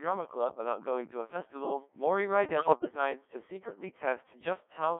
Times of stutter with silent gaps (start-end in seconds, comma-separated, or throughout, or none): none